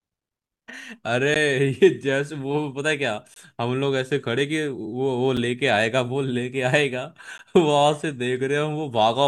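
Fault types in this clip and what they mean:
Gap between stream segments: the timestamps of adjacent two-second segments fail to meet, so the player pads the missing span with silence. In this speech clip, hard-edged dropouts occur at 1.34 s, 3.34 to 3.36 s, 5.37 s and 7.38 s. They are regularly spaced about 2 s apart and range from roughly 6 to 21 ms. No audio is lost; the silence is inserted, stretching the timeline slightly at each boundary.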